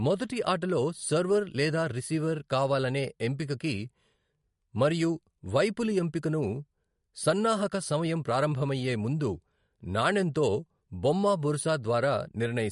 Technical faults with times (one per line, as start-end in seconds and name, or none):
0.00-12.71 MP3 compression